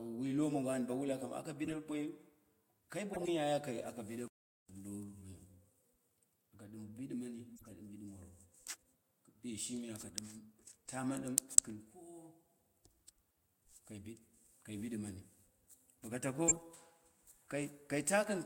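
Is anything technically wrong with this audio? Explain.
Yes. Damaged compressed frames were decoded and played anyway, and playback briefly stalled.

Corrupt frame decoded, at 1.64–1.72 s, 3.13–3.28 s, 7.57–7.72 s and 16.48–16.58 s: flipped bits made the decoder misplace energy across a few frames, producing short chirpy noise bursts. These peak around -30 dBFS in the first two, very faintly at about -50 dBFS at 7.6 s, and loudest at about -15 dBFS at 16.5 s.

Playback stall, at 4.28–4.69 s: the player likely ran out of buffered data, so the speech cuts to silence for about 413 ms before resuming.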